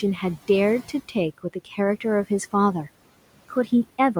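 A speech recording, with room noise sitting about 21 dB below the talker. Between 1.38 and 1.78 s there is speech cut by the noise suppressor. The suppressor mistakes quieter parts of the speech for background and turns them down along with the room noise. The dips add up to roughly a tenth of a second in that window. At the deepest point the level falls by about 14 dB. Those moments sound swallowed and faint.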